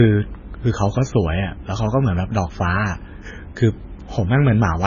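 Throughout, the speech sounds watery and swirly with nothing above 7.1 kHz, likely heavy MP3 compression, fitting a very low bitrate near 16 kbps.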